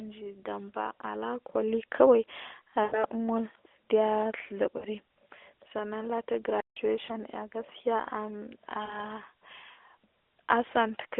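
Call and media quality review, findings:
Lost AMR speech frames at 2.84–3.05 s, 4.78–4.85 s, 7.06–7.14 s and 8.86–8.95 s. Symptom: sound smears into a held warble, then fades and returns weak. The longest, at 2.84 s, spans about 80 ms, consistent with four consecutive 20 ms frames; 7.06 s is a single-frame dip. Component: AMR-NB decoder concealment, repeating the last good pitch and spectral envelope at falling gain. Spectrogram: harmonics frozen flat, then decaying. Waveform: shrinking envelope with a soft restart.

Playback stall at 6.60–6.76 s, about 155 ms. Symptom: sound cuts out mid-flow, then resumes. Likely cause: player buffer underrun or a blocked audio thread, not the radio link. Waveform: flat near-silent line. Spectrogram: clean full-height gap across the 300–3500 Hz line band of the 12.2 kbps AMR-NB stream.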